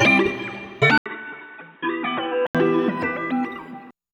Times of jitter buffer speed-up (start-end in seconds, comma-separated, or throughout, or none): none